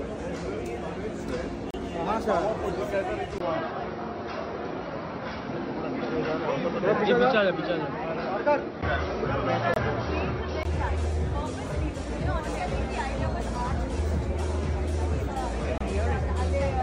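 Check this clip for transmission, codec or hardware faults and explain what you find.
Two kinds of fault are present: three short gaps between stream segments and one stretch where the input has moved to a poorer device.

Gap between stream segments: hard-edged dropouts occur at 1.71 s (33 ms), 9.74 s (24 ms) and 15.78 s (26 ms). Their placement fits a stream cut into 2-second segments whose timestamps don't quite meet, so the player inserts silence to cover the hole. Nothing is missing from the sound. It simply stops abruptly and resumes, adding a few tens of milliseconds each time.

Input switched to a poorer device: from 3.38 s to 10.65 s the sound turns dull and narrow, with nothing above 5.8 kHz. A faint new noise floor, about 40 dB under the signal, appears with it, while the overall level stays roughly the same. A 20 ms silence marks the change. This is likely a mid-recording handover to a lower-bandwidth microphone or a headset call profile, with the original input returning at 10.65 s.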